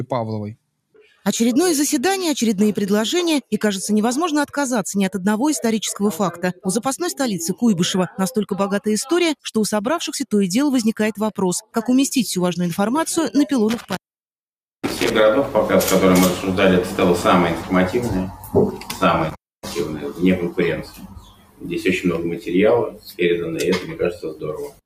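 A noise suppressor applied to music or sounds runs throughout. Its level swings of around 10 dB let attacks through while held sound pumps, which sets it apart from ordinary compression. The sound cut by the noise suppressor drops by about 9 to 21 dB at 0.56–1.26, 11.61–11.76, 18.31–18.54, 18.75–18.96, 20.8–21.7, 22.9–23.2 and 23.8–24.81 s. These cuts sink sustained tails rather than gating whole events.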